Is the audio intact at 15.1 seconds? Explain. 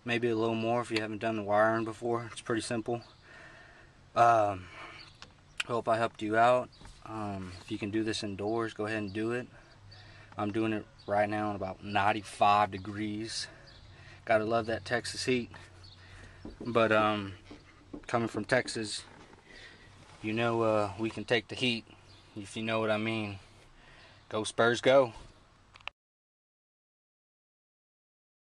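No, there's a Bluetooth SBC bit pool drop from 14.97 to 15.95 s. The squeezed bit budget, which fits a fall to around 99 kbps, dulls the treble and adds gritty noise.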